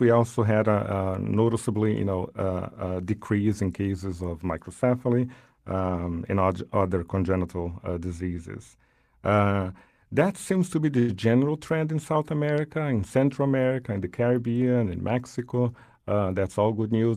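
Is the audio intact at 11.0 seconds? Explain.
No. From 10.99 to 11.12 s, just after "that seems to be" and before "general trend in", there is a short stall from a late packet. A packet missed its playout time, the jitter buffer emptied, and the receiver stretched the last sound for about 92 ms before resuming at the same point. You hear a held sound with a slight buzz or dip, not a gap. Unlike a packet loss, nothing is missing; everything afterwards simply plays 92 ms later.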